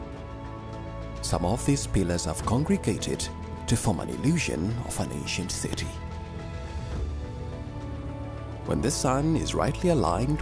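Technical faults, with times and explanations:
No faults are detected anywhere in the recording.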